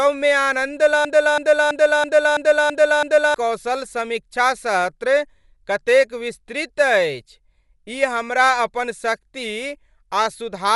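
A speech recording that has likely passed through Dolby Digital compression at a low bitrate, with the dullness and roughness pointing to something near 64 kbps. With so few bits the encoder cuts the band and leaves many frequency lines without mantissa detail, which the decoder fills with dither noise. The result is plainly audible for the whole clip: nothing is present above about 11.5 kHz, so the speech sounds dull, and a rough, fluttering noise clings to its tonal parts. From 1.05 s to 3.34 s a broken-record loop takes over. The player, encoder or stream likely stalled and kept resending the last fragment it held, so a 330 ms piece of sound repeats exactly, back to back, 7 times. During those 2.3 seconds the audio that should have played is lost, and the speech resumes only after the stuck fragment stops cycling.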